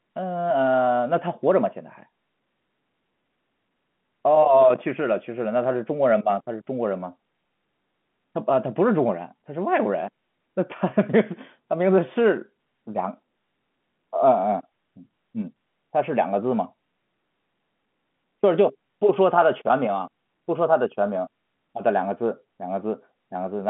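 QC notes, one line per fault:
No faults were heard in this speech clip. The sound has passed through G.711 telephone coding, which fits A-law at 64 kbps, and the line band runs from about 150 Hz to 3.4 kHz, with nothing above 3.8 kHz.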